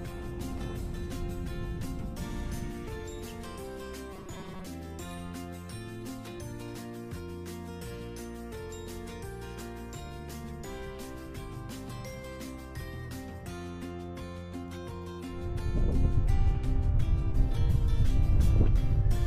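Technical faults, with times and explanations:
4.13–4.69 s, robotic sound from repeated short buffers. For just over half a second the sound turns hard and metallic. A steady buzz at 188 Hz rides on top of it, though the broad shape of the sound still comes through. The likely cause is new audio arriving too seldom, so a short block is replayed to fill the gap. A 188 Hz buzz fits a block of about 5.3 ms. Roughly half of this stretch is repeats, so real audio is skipped.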